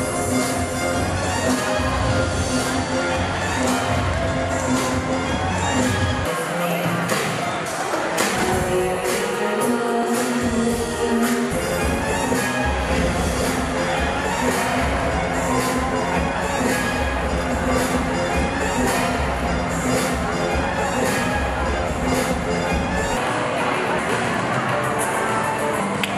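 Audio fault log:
3.54 s and 10.03 s, dropped buffer (overrun). Each is a jump where the sound skips ahead with no gap. A few milliseconds go missing at 3.54 s and roughly 10 ms at 10.03 s. The likely cause is samples overwritten before being read.
8.35 s, 13.43 s and 23.98–24.00 s, damaged data in a compressed stream. Each is a brief glitch lasting about 20 ms. Corrupt bytes make the decoder misread frames and lose sync. The sound garbles until it finds the next valid frame.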